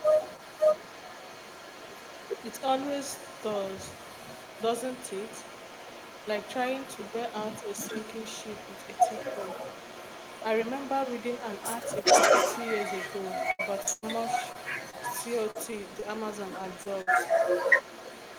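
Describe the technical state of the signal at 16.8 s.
At 16.8 s you're inside a burst of repeated packet loss (robotic sound), running from 13.51 to 17.17 s. About a dozen holes, the longest around 100 ms, get patched by stretching the last sound, so it comes out choppy with pieces missing. Over the whole clip there's also an echo leak: a copy of the speech comes back about 0.41 s late, roughly as loud as the original, likely from a loudspeaker echo canceller letting it through.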